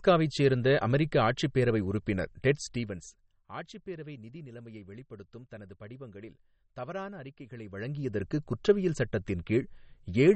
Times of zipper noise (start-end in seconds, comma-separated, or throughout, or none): 2.53-3.44, 7.48-8.27